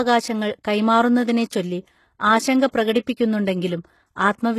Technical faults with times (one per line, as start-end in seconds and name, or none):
0.00-4.58 HE-AAC compression
2.71-2.73 pre-echo